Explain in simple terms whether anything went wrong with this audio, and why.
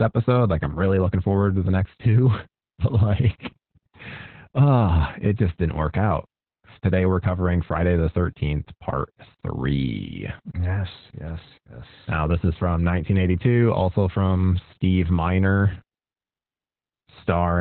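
Something did go wrong, for the whole recording: the speech carries heavy Opus voice compression. The encoder was squeezed so hard that it dropped everything above roughly 4.2 kHz and described the voice only coarsely, so it sounds muffled, hoarse and a little robotic from start to finish. A plain muffling filter would just dull the sound while keeping it smooth; here the grainy, synthetic roughness points to the codec rebuilding the voice from a crude sketch.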